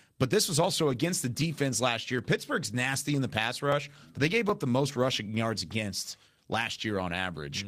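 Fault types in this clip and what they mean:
Lost packet rebuilt from error correction: packets went missing in transit, but each following packet carried a low-bitrate spare copy, and the decoder played that copy instead of leaving silence. The speech never drops out, but it briefly turns rougher and noisier. This happens from 0.91 to 0.97 s, about 40 ms of rebuilt sound that fits two lost packets, and again at 5.71 to 5.73 s, about 20 ms that fits a single packet.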